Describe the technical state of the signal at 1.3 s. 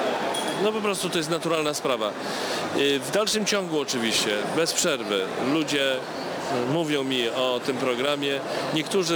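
At 1.3 s, as throughout the clip, there is crude rate conversion: a 48 kHz to 44.1 kHz change made by picking the nearest sample. The periodic timing error adds a gritty, inharmonic fizz roughly 20 dB below the sound. A spectrogram shows stray lines unrelated to the harmonics.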